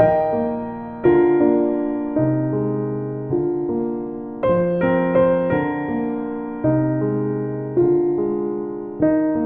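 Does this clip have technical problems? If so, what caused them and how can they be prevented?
No, this clip has no technical problems, so there is nothing to prevent.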